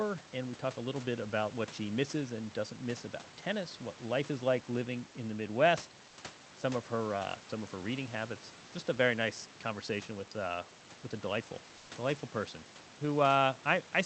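At 11.77 to 11.89 s, between "uh with a delightful" and "delightful person", the room background briefly turns into a flat, featureless hiss about 1 dB quieter for 120 ms. That's comfort noise in place of the background, likely from Opus discontinuous transmission.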